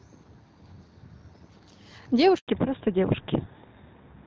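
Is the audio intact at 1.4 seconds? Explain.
Yes, the audio is intact at 1.4 seconds, with no fault at that moment.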